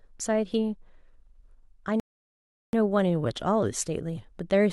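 At 2.00 s the speech stops dead and stays silent until 2.73 s: a rebuffering stall. The player exhausted its downloaded audio and waited about 0.73 s for more to arrive before continuing. What sets it apart from a dropout is that nothing goes missing. The speech resumes at exactly the point where it broke off, so the phrase is intact but stretched by an inserted gap, and the clip runs longer by that amount.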